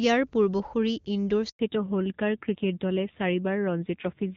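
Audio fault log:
1.49 to 1.59 s, handover gap: right after "পূৰ্বসূৰী ইন্দোৰ" the speech cuts off within a few tens of milliseconds and 100 ms of silence follows. The call was being passed from one network to another, and no speech frames arrived while the switch took place. Whatever was said in that window never reached the far end. The sound returns only once the new link begins carrying frames.
1.59 to 4.37 s, fallback to narrowband: from the moment the sound returns after the gap, nothing is present above 4 kHz. Before the handover the call ran on AMR-WB HD Voice at a rate consistent with 23.85 kbit/s, and there the upper band sounds clean. After the handover the call continues on the older narrowband AMR codec, whose sound fits about 7.4 kbit/s. The loss of the upper band makes the speech duller, and the lower rate adds a rough edge.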